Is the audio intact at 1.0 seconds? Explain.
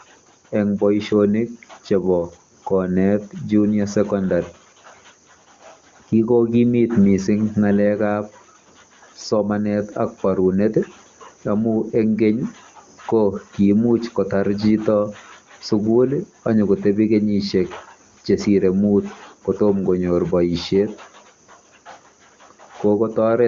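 Yes, the speech is intact at 1.0 seconds, with no fault at that moment, and the AMR wideband (HD Voice) codec carrying it at 23.85 kbit/s leaves at most faint coding traces there.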